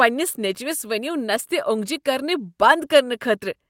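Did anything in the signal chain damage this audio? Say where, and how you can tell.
No, nothing in this speech recording stood out as damage from any stage of the signal chain when I listened to it.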